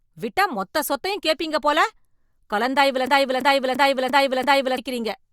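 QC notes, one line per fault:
3.07–4.78 s, system hang loop: the driver froze while the hardware kept cycling one buffer, so a 341 ms piece of speech repeats exactly five times at 2.93 per second. That makes a stutter fitting a 16384-sample buffer, and around 1.5 s of speech is lost.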